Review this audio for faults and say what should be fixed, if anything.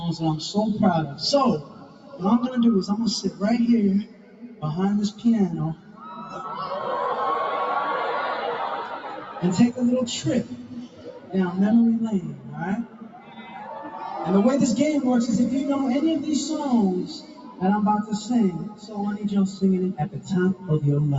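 A speech-tuned noise suppressor applied to music or sounds stayed active throughout, mistaking steady tones and decays for noise, so the level pumps by about 10 dB.

Sound cut by the noise suppressor: held and fading sounds sink by about 7 to 11 dB, with tails cut short, at 1.06–2.22, 4.04–6.35, 8.99–9.43, 10.44–11.34, 12.32–13.67 and 17.1–20.69 s.

To prevent this, switch off noise suppression, or use a music mode, whenever the call carries anything other than speech.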